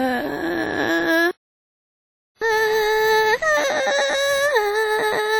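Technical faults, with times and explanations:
throughout: computer activity noise, a buzzing at roughly 100 Hz pulses about 30 dB under the music, following the machine's load rather than the musical content.
throughout: WMA compression, likely at a low bitrate, leaves heavy ringing, washy smearing and breathing hiss tied to the signal, unlike the load-driven, independent computer buzz.
1.31–2.42 s: playback stall, the music cuts out mid-flow for about 1.1 s, likely the player starving for data, then resumes where it stopped.
2.42 s onward: catch-up at higher speed, the backlog plays 1.1 times faster, raising pitch about one and a half semitones, a shift that persists to the end.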